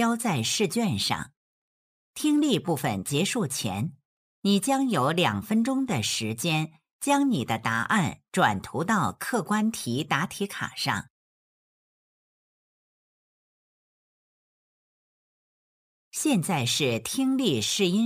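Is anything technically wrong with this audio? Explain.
Yes. Throughout, there's sample clock jitter: the converter's clock wobbles by a few microseconds, so steep loud or bright passages pick up roughness about 25 dB down.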